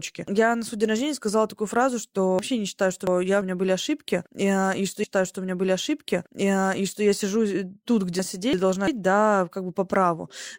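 Between 2.39 and 3.41 s, chunks out of order scramble the speech. A 0.34 s piece plays after material that should follow it, which fits a chunk delivered two positions late. Nothing is missing, but the sequence jumbles and there are three hard joins.

From 5.03 to 7.03 s, a stream segment is repeated. The same 2.0 s of speech is queued twice, adding 2 s to the running time, and a small blip marks the jump back.

At 8.19 to 8.88 s, chunks out of order recur. A 0.34 s piece lands one position late, leaving a brief garbled moment.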